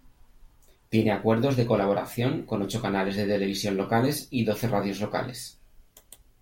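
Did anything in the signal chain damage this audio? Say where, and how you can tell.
No, none of the stages between capture and playback has left any audible damage on this speech recording.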